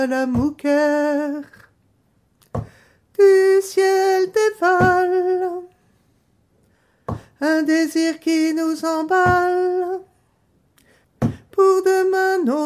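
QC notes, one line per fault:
No faults found. Nothing in the audio calls for a QC note.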